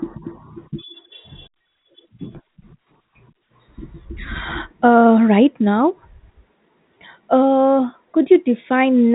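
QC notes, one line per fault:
No faults turn up in the speech, which carries the band limit of G.711 telephone coding with nothing above about 3.8 kHz.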